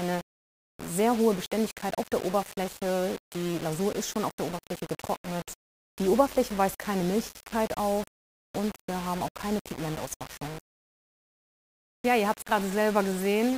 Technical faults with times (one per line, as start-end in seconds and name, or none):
0.00-13.57 low bit depth without dither